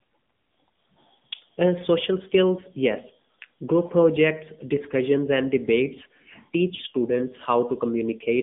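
Throughout, AMR narrowband mobile codec damage leaves the speech buzzy and synthetic. The spectrogram is cut flat above 3.7 kHz, and the artefacts fit a low rate near 7.95 kbps.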